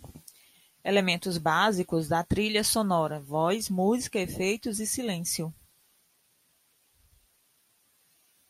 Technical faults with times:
none

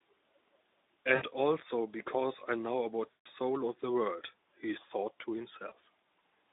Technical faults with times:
1.15-1.23 VoIP packet loss concealed by the speech codec
3.11-3.26 VoIP packet loss concealed by the speech codec
5.69-5.72 VoIP packet loss concealed by the speech codec

